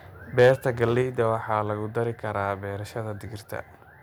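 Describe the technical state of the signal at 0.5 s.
At 0.5 s the signal is just leaving a short stretch of microphone overload that runs from 0.39 s. The loudest peaks have their tops sheared flat, roughly 4 percent of samples, giving a harsh, crackly edge to the speech. The likely cause is input gain set about 4 dB too hot, so peaks hit the converter's ceiling. Unlike dropouts or codec artefacts, the distortion tracks loudness, appearing only on the strongest peaks.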